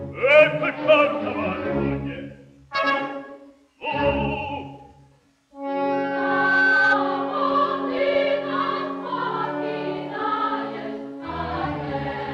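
A loudspeaker feedback squeal breaks into the audio at 5.92 s and stops at 6.97 s. It is a single tone at 1.5 kHz. It swells for around three quarters of a second before peaking. At its height it sits roughly 5 dB above the rest of the sound. A microphone was picking up the loudspeaker it fed. At 1.5 kHz the loop gain went past one, so that frequency kept feeding itself.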